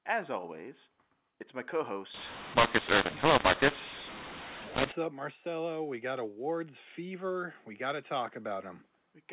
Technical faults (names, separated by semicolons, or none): mu-law and A-law mixed up